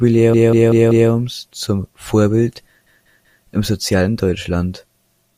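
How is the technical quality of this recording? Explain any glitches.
The recording stutters twice from repeated frames. Between 0.34 and 1.10 s, and again between 2.86 and 3.44 s, a 192 ms block of compressed data was delivered more than once. The decoder replays that same stretch of speech four extra times, then three, lengthening the audio by 768 ms and 576 ms.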